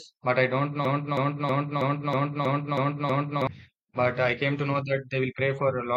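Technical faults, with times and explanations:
0.85 to 3.47 s, broken-record loop: just after "but I don't", one 0.32 s fragment of speech repeats identically eight times back to back, and the speech meant for that stretch is lost. A stalled player or stream likely kept resending its last buffer.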